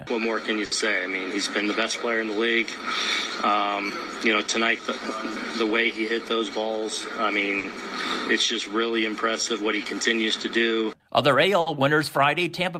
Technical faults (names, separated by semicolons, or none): clock drift between sender and receiver; repeated timing corrections; short stall from a late packet